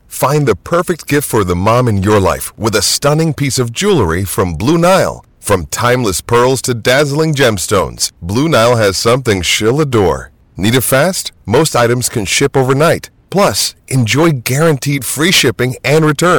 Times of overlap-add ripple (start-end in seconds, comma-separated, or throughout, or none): none